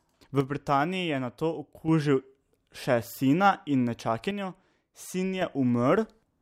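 From 0.41 to 1.88 s and again from 4.31 to 5.42 s, the speech drops abruptly by about 6 dB, then returns. The likely cause is one channel dropping out, so the mono sum carries only half the shared signal.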